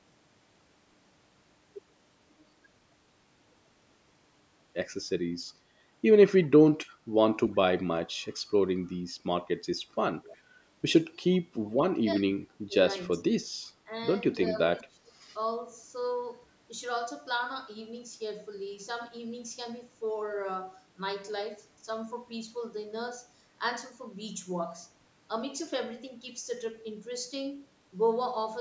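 At 10.35 s a faint echo leak appears for about 60 ms. A copy of the speech returns 359 ms late. It sits roughly 40 dB below the direct voice, so it is only a brief ghostly trace. The likely cause is an echo canceller on a loudspeaker end. It left part of what its microphone picked up, and that residue was sent back.

From 12.01 s to 15.22 s the speech repeatedly sinks. This is speech suppressed in double talk. The dips fall at 12.01–12.48 s, 12.65–12.75 s, 13.18–13.24 s, 13.85–13.92 s, 14.52–14.58 s and 14.79–15.22 s. The longest ones cut deepest, around 20 dB. The short ones at 13.85 s and 14.52 s are slight. Both sides were likely talking at once. The canceller could not tell the talker from the returning echo, so it turned everything down.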